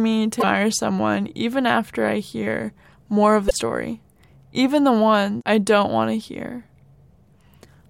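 Damaged data in a compressed stream strikes twice: from 0.38 to 0.44 s, just before "someone even after I", and from 3.46 to 3.52 s, right after "I hear more of". Each time corrupted bytes make the decoder misread frames and lose sync, leaving a brief glitch.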